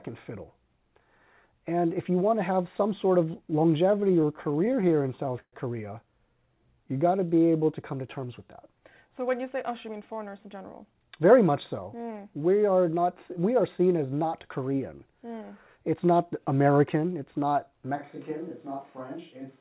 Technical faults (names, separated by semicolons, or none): repeated stalls (stutter); jitter buffer slow-down; jitter buffer speed-up; switch to a distant microphone